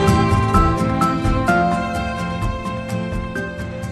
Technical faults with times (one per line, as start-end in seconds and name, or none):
none